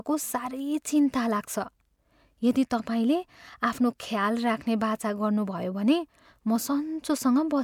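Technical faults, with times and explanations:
No technical faults can be heard in this speech recording. Nothing in it calls for a time, a value or an explanation.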